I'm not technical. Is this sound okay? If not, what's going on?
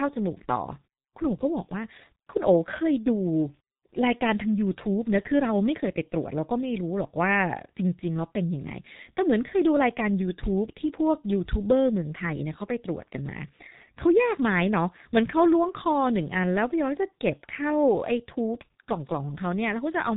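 No. The speech has been passed through the G.723.1 codec, an early internet-telephony format, and the damage is heavy for the whole clip. It keeps nothing above about 3.8 kHz, so the voice sounds muffled. The codec works in 30 ms chunks and rebuilds the voice from a simplified model that updates slowly, which makes it sound hoarse and smears consonants together.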